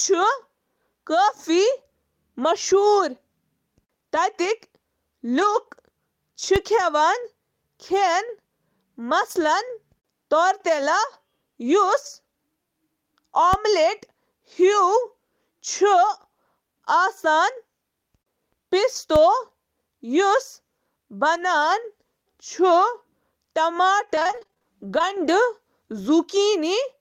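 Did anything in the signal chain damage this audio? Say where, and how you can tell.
Yes. On the network and codec side, a lost packet rebuilt from error correction turns up at 1.63 s, 4.15 s and 14.51 s as single 20 ms patches, and at 5.37 to 5.55 s as a 100 ms run. Each missing packet was replaced by the low-bitrate copy carried in the next one, so there's no gap, just a brief rougher, noisier texture. On a spectrogram those frames show thinned, smeared detail.

A DC step happens at 6.56 s, 13.53 s and 19.16 s, which points to the converter or analogue input stage. At each point the waveform's zero line jumps abruptly, heard as a low thump or click while the sound carries on unchanged. The offset then drains away through a 5 Hz high-pass, so on the waveform the baseline leaps and curves back over a fraction of a second. A spectrogram shows a brief broadband smear at the lowest frequencies.

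Scattered short gaps run from 21.33 to 25.05 s, a network fault. Around fifteen packets went missing or arrived late, one here and one there. Together they add up to about 300 ms, roughly 7 percent of that stretch, and the longest hole is around 30 ms. The receiver patched each by extending the preceding sound, giving short ticks, smears and hiccups. A spectrogram shows thin vertical seams where harmonics briefly freeze or break.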